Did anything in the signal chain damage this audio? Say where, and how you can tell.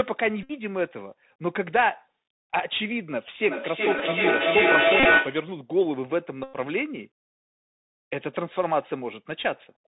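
Yes. Three separate faults are audible.

Codec stage: the whole clip carries Bluetooth CVSD headset codec damage, and it is plainly audible. The speech is band-limited with nothing above 4 kHz, and a granular hiss sits under it. Sibilants come out scratchy, and loud high-frequency sounds distort because the one-bit delta modulator's adaptive step cannot slew fast enough. The character fits a 64 kbit/s CVSD link between headset and phone.

Radio link stage: Bluetooth headset packet repeats, where lost voice packets were replaced by re-decoding the previous packet. Re-using the last packet's bits every 3.75 ms turns each run into a steady buzz near 267 Hz. This happens at 0.43 to 0.52 s (about 64 ms lost), 3.99 to 4.02 s (about 11 ms), 5.00 to 5.05 s (about 41 ms lost in scattered bursts, the longest run roughly 30 ms), and 6.44 to 6.56 s (about 101 ms, the longest buzz).

Acoustic path between endpoints: feedback echo between two devices from 3.48 to 5.54 s. 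The speech returns at an interval of roughly 0.4 s, which points to a second device in the same room playing the call back into this microphone. That device's echo canceller cannot remove it, since it only cancels its own playback. The loop gain is high enough that the repeats build rather than decay, peaking about 6 dB above the direct speech.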